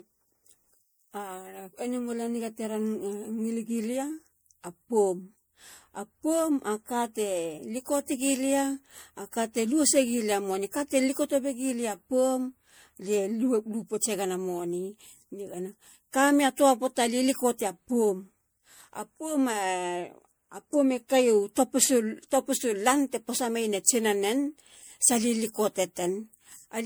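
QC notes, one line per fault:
Throughout, generation loss: the speech sounds swirly, smeared and hollow beyond what a single lossy encode would leave, with consonant attacks blurred, most likely from repeated MP3 encoding, around five passes, at a rate that fits 96 kbit/s. Each pass requantises on a shifted frame grid, so noise and gaps accumulate. A spectrogram shows patchy, flickering holes between harmonics, smeared onsets and nothing above 20.9 kHz. The waveform shows softened transient edges.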